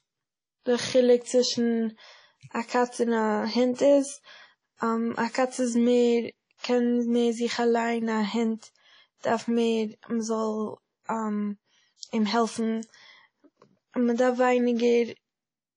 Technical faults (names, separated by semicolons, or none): WMA compression